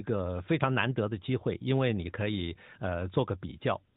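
No technical faults are audible.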